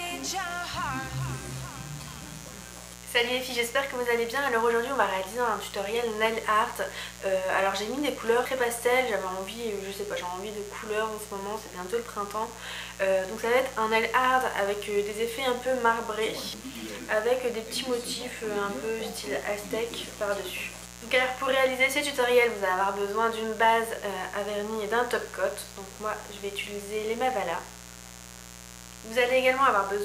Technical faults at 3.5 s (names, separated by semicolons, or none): mains buzz